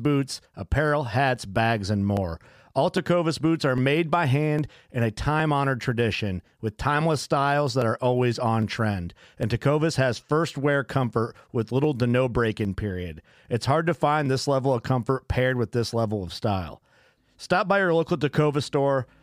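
A speech recording with a click every 0.81 s or so, from 0.56 s right through to 19.09 s, which adds up to roughly twenty of them. That steady beat is the giveaway for clock drift buffer slips. Two devices are likely running on separate clocks that disagree by around a tenth of a percent, so the buffer between them creeps until a few dozen samples get dropped or doubled, and you hear each jump as a tick.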